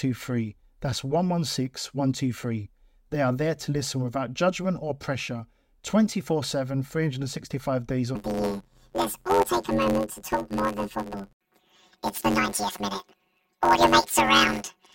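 Planar audio read as interleaved begins at 8.15 s and runs to the end of the speech. The stereo data arrives as blocks of all left samples followed by all right samples, but it is being read as alternating left-right pairs. Each block therefore plays twice at double speed, so the overall pace holds. With blocks only about 10.9 ms long, there is no clear octave jump. Instead the speech takes on a robotic buzz at roughly 92 Hz, the block rate.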